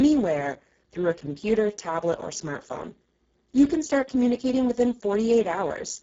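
Speex codec damage runs through the whole of this speech clip, from start to finish, and it is heavy. The CELP coder has very few bits for the excitation signal, which fits a very low setting near 6 kbps, so the speech comes out noisy and hoarse rather than natural. Nothing is present above 7.7 kHz, and the band between 4 kHz and that limit is only a shaped, noise-like fill rather than real detail.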